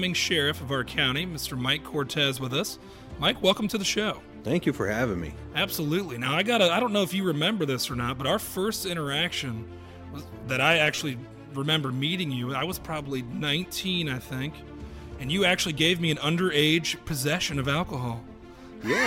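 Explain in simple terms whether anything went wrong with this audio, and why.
Brief hissy smears replace the sound at 10.95–11.01 s and 15.78 s. These are lost LE Audio frames, which the decoder patched with noisy copies of earlier sound.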